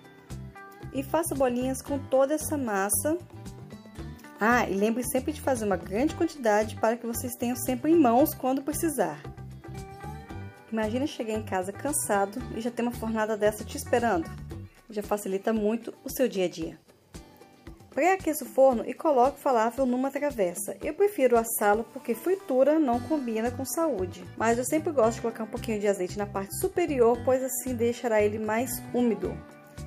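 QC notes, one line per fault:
No faults found.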